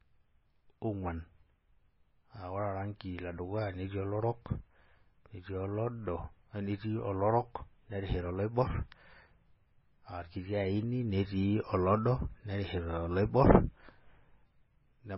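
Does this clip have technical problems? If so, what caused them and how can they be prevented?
Yes. Throughout, the speech was likely passed through MP3 compression at a very low bitrate, around 17 kbps by the sound of it. The encoder threw away everything above 5.6 kHz and let weak frequency lines flicker between frames, leaving the speech dull, watery and swirling, with metallic chirps on s sounds. Encoding at 128 kbps or higher, or keeping a lossless copy, would prevent this.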